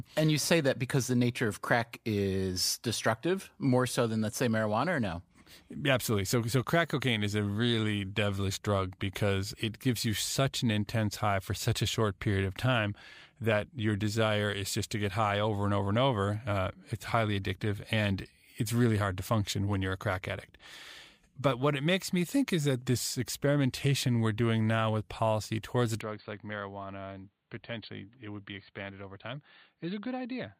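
Speech that turns dull and quieter at 26.01 s until the end, with no gap: likely an input switched to a poorer device. The spectrogram loses everything above 4.5 kHz, the waveform drops by roughly 10 dB, and a faint new noise floor appears.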